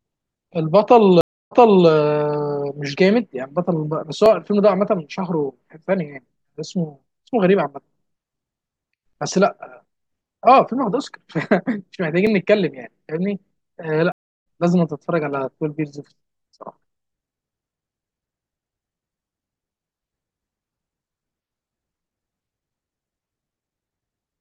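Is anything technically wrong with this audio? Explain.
Yes, there are two stream reconnects in this speech. At 1.21 to 1.88 s the connection drops, the audio goes silent for about 0.3 s, and a fresh decoder picks up 0.37 s earlier, so you hear a short stretch repeated. At 14.12 to 14.46 s it's silent for 0.34 s and resumes roughly 0.3 s later, so a bit of speech is skipped.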